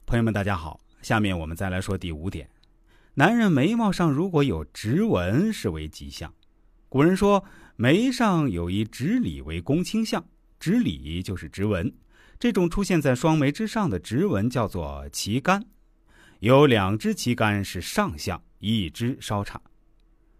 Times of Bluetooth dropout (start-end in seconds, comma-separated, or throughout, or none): none